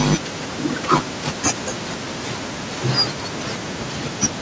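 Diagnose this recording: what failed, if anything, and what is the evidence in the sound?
Nothing failed; no faults heard.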